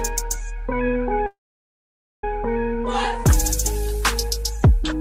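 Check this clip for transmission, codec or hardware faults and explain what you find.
One fault: a call audio freeze from 1.26 to 2.24 s. The last sound is held over as a brief fading tail, then 0.87 s of silence. Audio resumes where it stopped, with nothing lost but 0.97 s late. Delayed packets likely emptied the jitter buffer.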